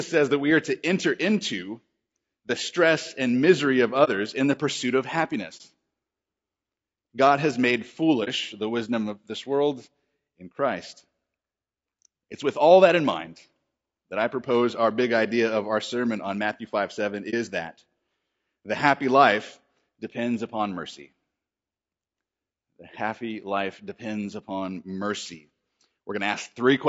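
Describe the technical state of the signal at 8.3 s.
A brief, soft-edged dropout runs from 8.24 to 8.29 s, between "has made" and "the wisdom of this", fading out and back in. This is AAC frame loss with muting. The gap fits a single lost frame of about 30 ms, whose spectrum the decoder zeroed, and the overlapping windows smear the hole's edges.

Around that moment the speech also sounds rough and grainy, with noise filling the spaces between harmonics and a thin, artificial top band. This points to low-delay AAC compression, likely AAC-ELD at about 32 kbps, where short frames resolve pitch poorly and run out of bits.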